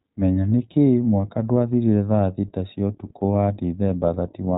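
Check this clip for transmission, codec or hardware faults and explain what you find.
One codec fault runs through the whole clip. Throughout, the speech is muffled above 4 kHz and plainly rough and synthetic: the iLBC codec codes each 20 ms frame independently, consistent with its 15.2 kbps mode.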